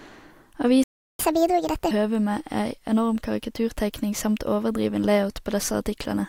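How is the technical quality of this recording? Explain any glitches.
The recording has two linked playback faults early in the speech, both within the first two seconds.

Playback stall, 0.84 to 1.19 s: the speech cuts to silence mid-flow for about 360 ms, then resumes where it stopped. The likely cause is the player running out of buffered data or its output thread being blocked, so nothing reached the output.

Catch-up at higher speed, 1.19 to 1.91 s: immediately after the gap, the speech runs at 1.5 times normal speed, with pitch raised by roughly seven semitones. The player is resampling its backlog to recover the lost time, then drops back to normal rate.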